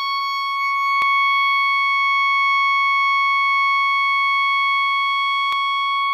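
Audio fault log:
1.02 s and 5.53 s, dropped samples: Two sharp single clicks cut through the music. Each is likely a tiny gap of well under a millisecond. The waveform leaps straight to a later value. That step makes a brief broadband click, too short to lose any sound.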